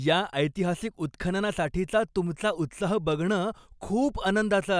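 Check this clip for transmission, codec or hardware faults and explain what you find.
Nothing stood out on listening to this speech recording, and there is no fault to report.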